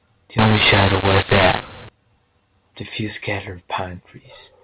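A speech clip whose A-law telephone samples were decoded as mu-law from 0.39 to 1.89 s, a mu-law and A-law mix-up. Because the two G.711 laws map their 8-bit codes to different levels, the speech there comes out harsh and distorted, and pauses fill with noise. Throughout, the telephone coding passes nothing above 4 kHz.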